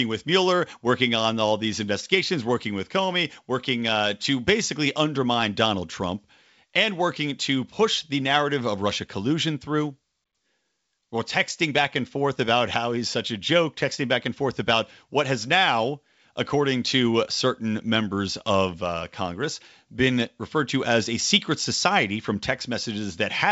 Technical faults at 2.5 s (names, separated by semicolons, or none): none